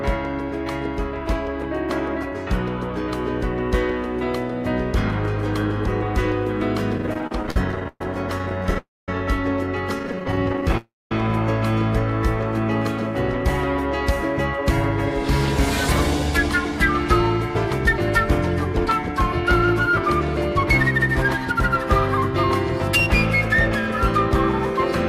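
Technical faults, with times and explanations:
6.98–10.74 s, repeated stalls (stutter): About forty brief stalls, the longest 124 ms. Late packets kept draining the jitter buffer. The last sound was stretched, so the audio drags but nothing is lost.
8.78–9.09 s, call audio freeze: The sound holds and fades for 0.29 s, mostly silent. It resumes where it stopped, nothing missing. Held-up packets likely emptied the jitter buffer.
10.77–11.12 s, call audio freeze: A 0.33 s hold that fades into silence. The audio then resumes intact. A delay jump likely starved the jitter buffer again.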